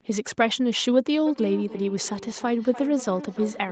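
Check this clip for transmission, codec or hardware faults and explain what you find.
One fault stands out: feedback echo between two devices, with the sound limited to about 8 kHz as a call codec would leave it. From 1.26 s to the end, the sound returns roughly every third of a second. Each repeat is thinner and rings more, peaking at about 13 dB below the direct sound. A second device in the room replays this stream, and the microphone captures it again. The local echo canceller cannot remove it.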